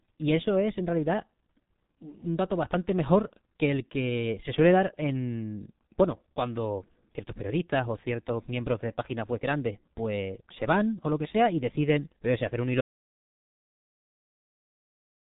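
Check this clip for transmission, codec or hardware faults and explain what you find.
Two faults are present: heavy low-bitrate codec damage throughout, and a dropout to silence at the end.

Throughout, the speech is muffled and hoarse, with smeared consonants and nothing above 3.8 kHz. This is heavy G.723.1 codec damage, consistent with roughly 6.3 kbit/s coding in coarse 30 ms frames.

From 12.81 s to the end, the sound stops dead into silence with no room tone. This audio dropout to silence likely comes from a lost input while recording continued.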